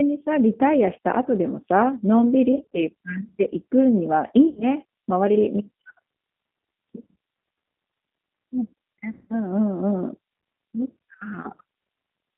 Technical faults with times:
0.00-12.38 G.729 codec
2.52-2.81 VoIP packet loss concealed by the speech codec
4.47-4.67 VoIP packet loss concealed by the speech codec
9.11-9.36 VoIP packet loss concealed by the speech codec

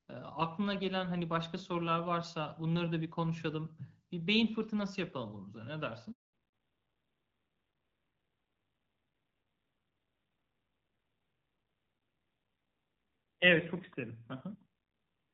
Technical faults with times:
6.11-6.33 handover gap
6.33-15.34 fallback to narrowband

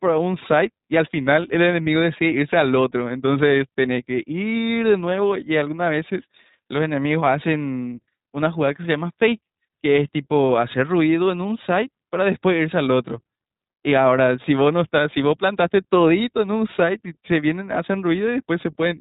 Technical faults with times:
0.00-19.00 iLBC codec

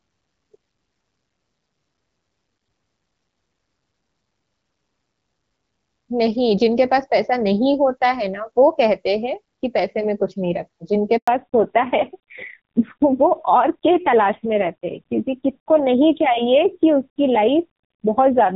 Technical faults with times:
11.17-11.27 handover gap
11.27-18.56 fallback to narrowband

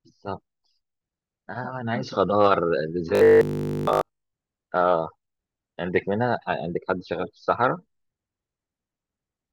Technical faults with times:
3.15-4.33 robotic sound from repeated short buffers

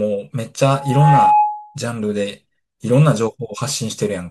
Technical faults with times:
0.72-1.78 loudspeaker feedback squeal

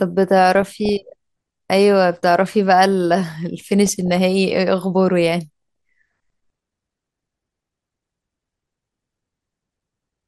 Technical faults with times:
0.00-10.28 MP2 compression
0.55-1.15 DAB burbling
3.86-4.17 DAB burbling
5.52-5.88 DAB burbling

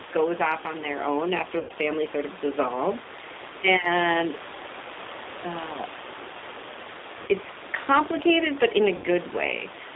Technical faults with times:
0.00-9.95 G.729 codec
1.59-1.72 VoIP packet loss concealed by the speech codec
7.22-7.29 VoIP packet loss concealed by the speech codec
8.96-9.07 VoIP packet loss concealed by the speech codec

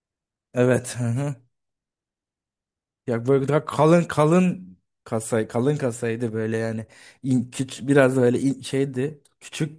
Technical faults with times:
none

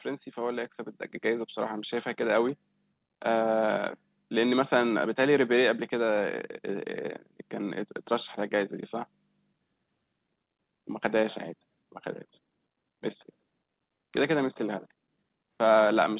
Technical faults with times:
1.02 microphone volume stepped up

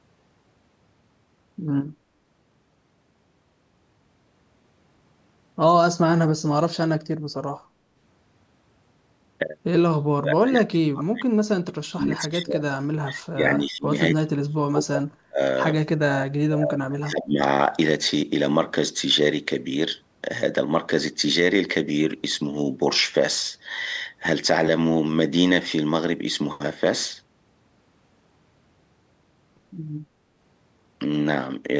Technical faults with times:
10.03-15.40 speech suppressed in double talk
15.83-17.39 speech suppressed in double talk

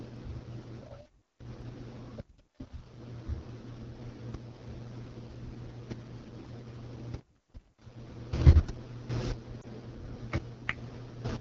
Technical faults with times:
0.00-11.41 AMR wideband (HD Voice) codec
9.61-9.65 lost AMR speech frames

